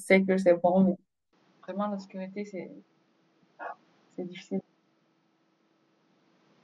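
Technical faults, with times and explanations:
1.33 s to end: input switched to a poorer device, likely. From 1.33 s the speech abruptly loses its top end, with nothing above 7.2 kHz, and drops about 10 dB in level, with no gap at the changeover. A new background noise floor appears roughly 35 dB below the speech. A change of microphone path explains all three together: the replacement device passes a narrower band, sits at a lower gain, and brings its own self-noise.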